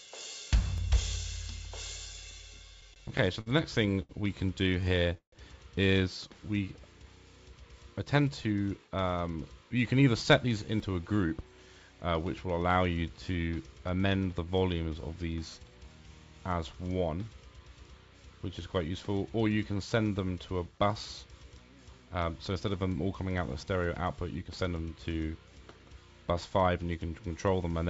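At 0.78 s there is a small jump forward in the sound. It is likely a dropped buffer (overrun): the samples were overwritten before being read, so about 10 ms vanished and the edges joined directly, with no silence.

From 2.81 to 5.34 s the audio stutters repeatedly. Packets arrived late, the jitter buffer kept running dry, and the receiver stretched the last sound to cover 15 gaps. The longest gap was 146 ms. Nothing is lost, but the passage drags.

From 8.20 to 9.37 s a jitter buffer speed-up makes the sound run at 113% speed with unchanged pitch. The receiver trimmed small pitch-period pieces, about 150 ms in total, to reduce excess delay. It sounds hurried.

At 10.8 s another skip of about 10 ms appears, again likely from a dropped buffer.

Two shorter speed-ups follow. From 19.75 to 20.28 s the sound runs at 110%, and from 26.56 to 26.98 s at 111%. Each removes about 50 ms.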